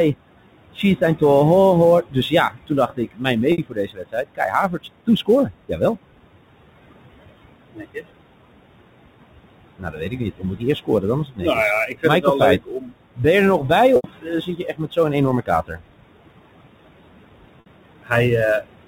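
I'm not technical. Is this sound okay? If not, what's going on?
No. There are four problems in this speech recording.

Noise suppressor artifacts run through the whole clip. A cleanup filter keeps pushing the background noise down between words and letting it back up under them. The voice can sound thin or watery.

Sample clock jitter is also present throughout. The recording device's timing wobbles slightly, so each moment is captured a touch early or late. You hear a hiss or roughness that grows on loud, bright sounds and disappears in the quiet gaps.

Speech cut by the noise suppressor happens five times. The cleanup filter mistakes parts of the voice for noise and turns them down. It happens at 0.75 to 1.22 s, just before "ho ho", and at 2.09 to 5.97 s, right after it. It happens again at 7.72 to 8.04 s, 9.78 to 15.81 s, and 18.03 to 18.65 s. In the longer stretches only some pieces are affected. 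Soft sounds and word endings come out swallowed or faint.

Packet loss with pitch repetition occurs three times: at 3.52 s for 60 ms, at 13.96 s for 80 ms, and at 17.6 s for 60 ms. Small chunks of sound went missing in transmission. The receiver filled each gap by repeating the last bit of voice. It sounds like a brief, buzzy held note.

The background room noise belongs to the original recording and isn't a fault. The phone-line quality also comes from the ordinary telephone format.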